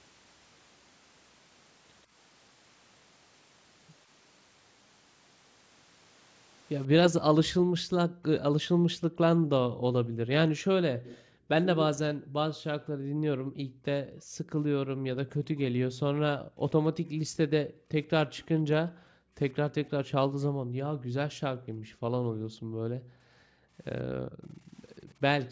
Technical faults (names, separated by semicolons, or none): background gated by the echo canceller; echo leak